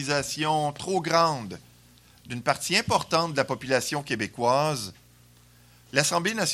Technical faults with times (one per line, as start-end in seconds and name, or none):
none